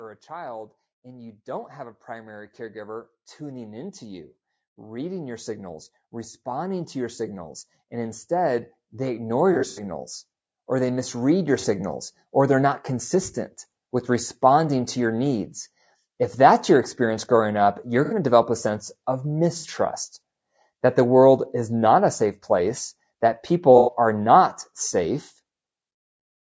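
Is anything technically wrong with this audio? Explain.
Yes. The speech has three kinds of fault.

Low-delay AAC compression runs throughout, likely from AAC-ELD at a rate that points to around 32 kbps. Short frames blur the harmonics, so the speech sounds plainly rough and grainy.

Automatic gain rising lifts the level by about 18 dB from 0.27 to 10.03 s. It adds about 3 dB more from 10.66 to 12.01 s, just before "or they're not consistent". The control judged the input too quiet, so speech and background swell together.

AAC frame loss with concealment occurs five times:
9.53 to 9.82 s, with gaps totalling 150 ms and the longest near a tenth of a second.
11.60 to 11.65 s.
18.05 to 18.14 s, between "experience growing up you're" and "to develop a sense".
19.58 to 19.67 s, after "develop a sense of".
23.78 to 23.93 s.

The decoder patches each gap from the last good spectrum. The result is brief smeared, noisy or phasey spots.

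The call microphone processing leaves nothing above 8 kHz.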